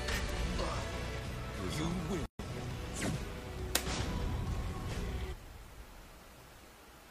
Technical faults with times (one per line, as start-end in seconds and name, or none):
2.26-2.39 gap at a join of encoded pieces